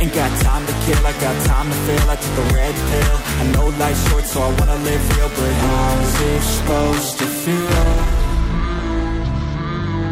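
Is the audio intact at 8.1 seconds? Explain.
Yes, at 8.1 seconds the audio runs intact, with no dropout, click, distortion or other fault to be heard at that point.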